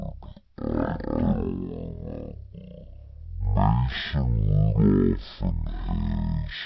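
A wrong sample rate makes this speech play at about 0.36 times its original speed and 17.6 semitones low, consistent with 44.1 kHz audio played back at 16 kHz.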